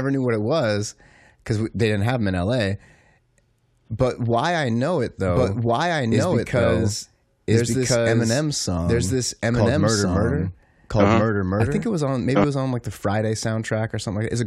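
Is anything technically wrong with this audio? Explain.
Yes. From 5.26 to 12.44 s, between "why I know it" and "it was on like", the speech has a doubled audio track: a second full-band copy, about as loud as the original, runs roughly one and a half seconds behind. It is likely caused by a slower capture path or an edit that left two out-of-step copies in the mix. Unlike an echo or reverb, the copy doesn't decay, has no room colour, and switches on and off abruptly.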